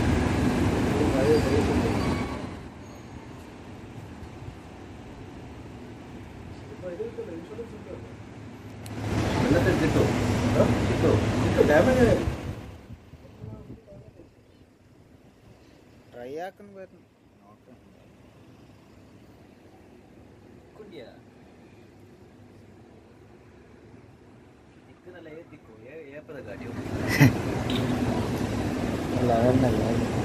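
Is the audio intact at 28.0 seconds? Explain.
Yes, the audio is intact at 28.0 seconds, with no fault at that moment.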